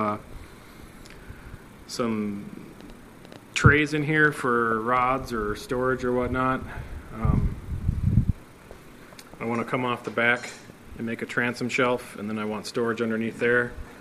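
From 2.81 to 5.03 s a train of clicks, around fifteen similar pops at an uneven pace of about 6.8 per second and roughly as loud as the sound itself, likely comes from interference or a faulty connection or power supply. It shows as thin vertical broadband lines on a spectrogram and narrow spikes on the waveform.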